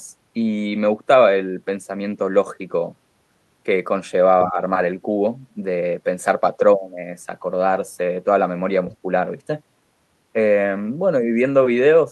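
At 4.40 to 4.44 s, a faint second voice slips in under the speech. This is the other side's voice leaking through. It sits roughly 20 dB below the talker. The likely cause is an echo canceller that left part of the loudspeaker signal in the microphone feed. The scrap is brief.

Right after, from 4.47 to 4.58 s, the speech dips by around 10 dB. This is speech suppressed in double talk. Both sides were talking at once. The likely cause is the canceller mistaking the talker for echo and pulling everything down. The voice sounds briefly pushed back.

At 8.91 to 8.97 s, the other side's voice leaks through again. It is fainter this time, roughly 30 dB under the speech. It is a short fragment, likely from the same incomplete echo removal.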